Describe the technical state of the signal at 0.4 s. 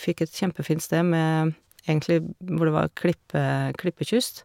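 At 0.4 s the speech signal is intact, with no audible fault at that moment.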